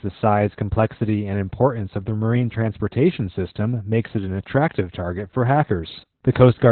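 From start to finish the speech carries Opus voice compression at a very low bitrate, which fits about 8 kbps in SILK mode. Nothing is left above 4.2 kHz, so the sound is narrowband and muffled. The coarsely coded excitation makes it hoarse and faintly robotic, which a plain low-pass filter would not do.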